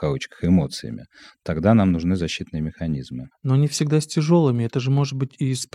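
No technical faults are audible.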